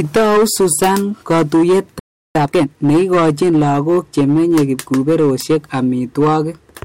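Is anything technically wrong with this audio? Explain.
Yes. There are three faults.

Hard clipping runs through the whole clip. The speech is driven about 14 dB past what the signal path can pass, so every peak is cut flat at the ceiling. Roughly a tenth of the samples are pressed against that limit. The squared-off waveform adds harmonics far above the speech band. The result is a harsh, gritty fuzz on every loud syllable, not just an occasional crackle on the strongest peaks.

A playback stall starts at 1.99 s and lasts until 2.35 s. The output goes silent for about 357 ms, right in the middle of the speech. Then the sound picks up again. The likely cause is that the player ran short of data, or its audio thread was held up, so it had nothing to send to the output until it recovered.

Time-compressed catch-up follows immediately, from 2.35 to 2.69 s. The player works through its backlog at twice normal speed. 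It does this by cutting out short slices of the audio and cross-fading across the gaps, rather than by speeding up playback. Because of that, the pitch stays normal. The speech sounds rushed for that third of a second, then returns to its proper pace.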